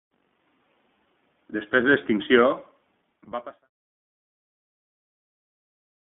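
Throughout the speech, the signal has passed through the iLBC codec. It squeezes the sound into a narrowband line and codes each frame's excitation independently, consistent with 20 ms frames at around 15.2 kbps. Nothing below 150 Hz or above 3.5 kHz survives, so the voice sounds thin and telephone-like. The damage is plainly audible as a rough, slightly synthetic grain. It stays present even as the level fades out smoothly from about 2.5 s to 3.69 s.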